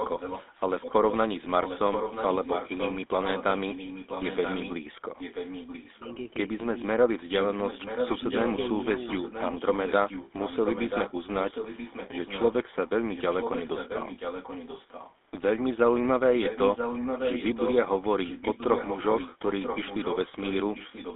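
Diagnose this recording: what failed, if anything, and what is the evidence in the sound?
The whole clip has gone through the GSM full-rate codec, so the codec stage is where this damage comes from, and it's plainly audible: the speech has that buzzy, gravelly roughness. That comes from a vocal-tract model driven by a sparse, regularly spaced pulse excitation rather than the real waveform, at about 13 kbps. The band sits between roughly 250 Hz and 3.6 kHz, so everything above that line is gone.

There's also an echo leak in the call processing. A delayed copy of the speech comes back 983 ms late, which points to a far end playing the call over a loudspeaker where the echo canceller likely didn't remove all of it. You can hear it over 0.0–1.17, 1.63–4.73, 5.18–6.18, 7.4–11.13, 11.44–12.53, 13.12–15.13, 16.42–17.74 and 18.23 s to the end. It's around 10 dB under the speech, except 16.42–17.74, where it's only about 5 dB down.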